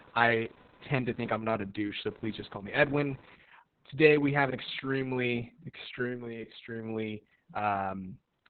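From 0 to 3.35 s, computer activity noise: processor or peripheral load disturbs the shared audio ground, adding a faint buzz around 500 Hz, roughly 30 dB below the speech. Throughout, Opus voice compression: the coder runs in SILK mode at about 6 kbps with narrowband limiting and coarse excitation coding, leaving the speech heavily muffled, hoarse and slightly robotic.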